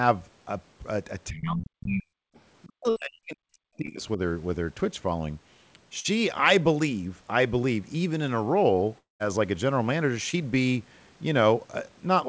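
From 1.3 to 2.06 s the speech is turned down, as deep as roughly 40 dB. That's speech suppressed in double talk, likely the echo canceller ducking everything while both ends talked. Inside that stretch, around 1.36 to 1.49 s, a second voice comes through at roughly 10 dB under the talker. That's the other side's voice leaking through, likely echo the canceller didn't fully remove. It shows up again faintly at 2.34 to 2.4 s, down around 35 dB.

From 2.65 to 4.19 s there's another long suppressed patch, about a second and a half, again likely from double talk. Within it, at 2.90 to 2.98 s, there's a burst of packet loss. Roughly 60 ms of audio is gone, patched with a held buzz or fading hiss before the speech jumps ahead. At 3.86 s a short concealed packet loss smears about 20 ms. The same thing happens around 6.0 to 6.06 s, covering about 40 ms.

At 8.98 to 9.22 s there's a long network dropout, likely a network stall. 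About 220 ms never arrived: the last sound is stretched into a fading tail, then there's roughly 150 ms of silence before the audio resumes further on. One more short concealed loss at 10.30 to 10.35 s blurs about 40 ms.

The top end stops at 8 kHz throughout, which fits a G.722 call path at 64 kbps.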